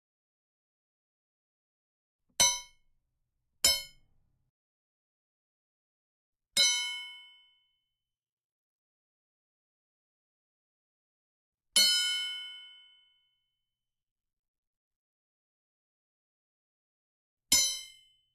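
No technical faults can be heard anywhere in this recording. Nothing in the way the sound is carried breaks into or disturbs it at any point.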